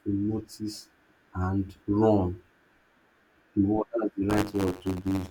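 From 4.29 s to the end of the speech, buffer tearing sets in: the writing side and the playback hardware have drifted so that they cross partway through every buffer period. A small slice of each period, roughly 5 percent, carries audio from about 20 ms earlier, spliced in with abrupt joins at both edges. The result is a steady robotic buzz at 93.8 Hz riding on the speech, which fits a 512-sample buffer.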